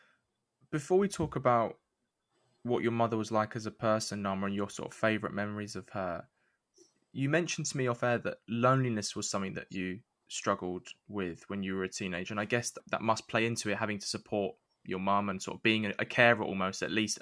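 Listening through the recording, nothing stood out as a technical problem at any point.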